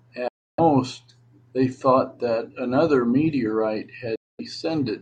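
Speech with two Bluetooth dropouts. The sound goes silent from 0.28 to 0.60 s and again from 4.16 to 4.41 s. Each time it resumes further along, as if it had kept playing. Packets likely arrived too late and were dropped.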